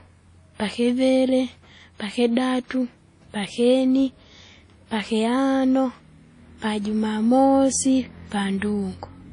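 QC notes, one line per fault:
Throughout, WMA compression: the speech rings and sounds washy, with hiss swelling and fading alongside it, likely from a low-bitrate transform codec, consistent with about 32 kbps. The spectrogram shows a hard ceiling at 10.1 kHz and blocky gaps where weak components vanish.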